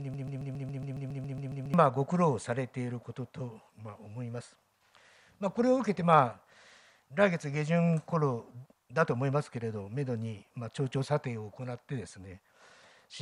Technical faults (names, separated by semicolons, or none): broken-record loop